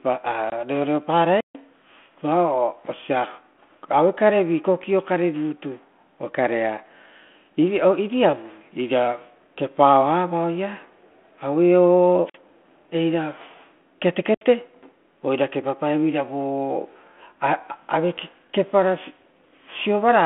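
Packet loss on the ADPCM call comes first, at 0.50 s: a hard-edged 20 ms hole, likely one lost packet, in speech whose 200 Hz to 3.4 kHz band fits 32 kbit/s G.726. The gap leaves the decoder's predictor and step size out of step with the sender's, so the speech re-enters slightly distorted before settling.

A wireless microphone squelch dropout follows at 1.38 to 1.56 s, then twice more at 12.24 to 12.38 s and 14.30 to 14.44 s. The FM link fades, hiss rises, and the receiver's squelch mutes for about 145, 49 and 71 ms before the speech returns.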